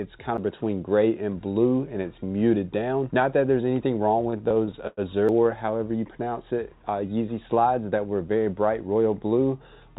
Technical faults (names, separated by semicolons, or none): CD skip; repeated stalls (stutter); jitter buffer slow-down; jitter buffer speed-up